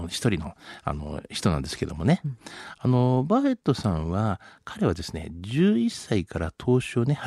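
Nothing stood out on listening to this speech recording.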